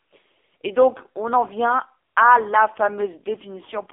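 Throughout, AMR narrowband mobile codec damage is heavy: a buzzy, synthetic voice fitting a very low bitrate near 5 kbps. The spectrogram is empty below 300 Hz and above 3.6 kHz.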